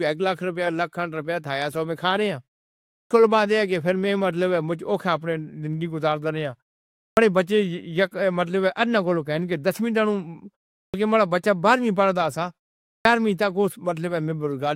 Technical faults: clipped start after a pause

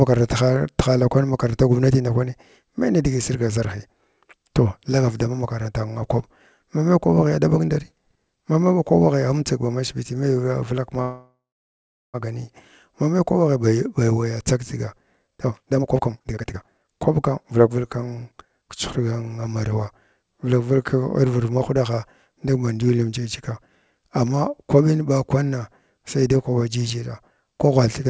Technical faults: call audio freeze; jitter buffer speed-up

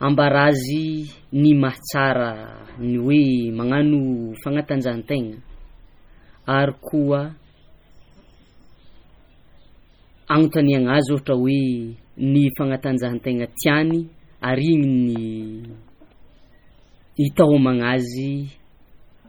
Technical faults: MP3 compression

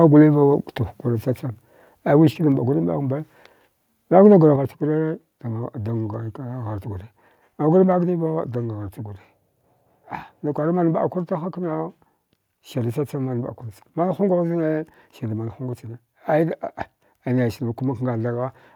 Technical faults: microphone volume stepped down

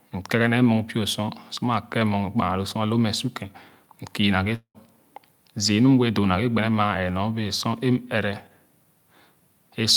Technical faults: long network dropout

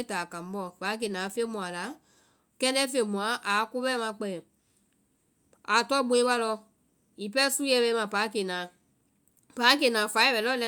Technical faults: none

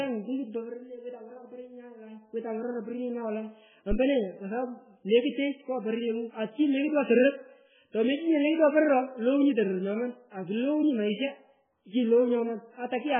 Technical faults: MP3 compression; phantom power thump

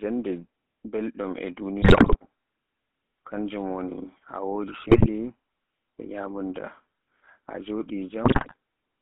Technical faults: GSM full-rate codec; GSM bit errors

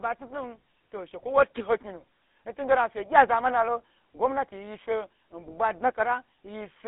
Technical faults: GSM full-rate codec

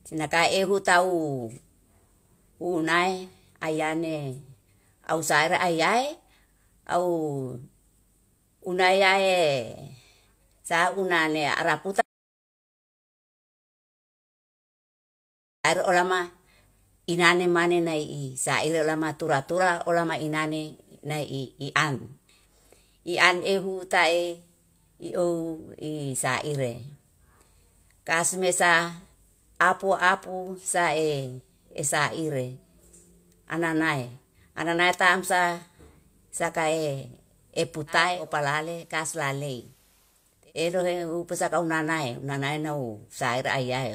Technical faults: audio dropout to silence; digital radio blending to analogue

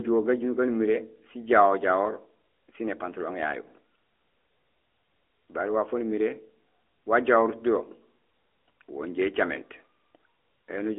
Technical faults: AMR narrowband mobile codec

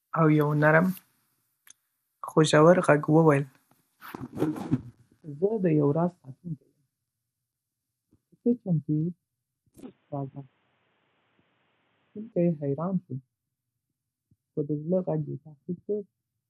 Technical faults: MP2 compression; input switched to a poorer device

